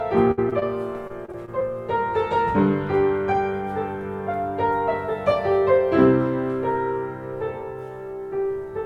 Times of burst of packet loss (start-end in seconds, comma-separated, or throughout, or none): 0.31-0.39